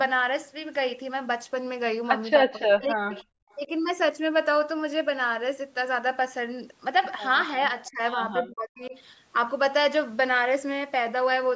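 From 2.44 to 3.14 s, speech suppressed in double talk: the echo canceller likely could not tell overlapping talk from loudspeaker echo and pulled everything down, so the voice sinks by about 40 dB and nearly vanishes. At 3.13 to 3.24 s comes an echo leak. Loudspeaker pickup likely slipped past cancellation, returning a faint, delayed scrap 309 ms late and about 25 dB below the speech. The suppression returns more briefly at 3.67 to 3.71 s (about 10 dB), then at 7.90 to 8.01 s and 8.44 to 8.94 s (about 20 dB each), leaving the voice dipped and chopped.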